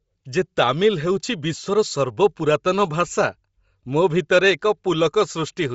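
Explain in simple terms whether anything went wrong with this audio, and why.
Yes, the sound was likely squeezed through Bluetooth LC3 compression, which drops fine high detail and fills it with hiss, so the speech sounds breathy and grainy throughout.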